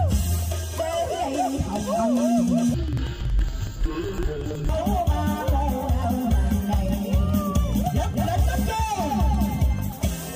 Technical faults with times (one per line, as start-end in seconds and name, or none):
2.74-4.73 interleaved audio read as planar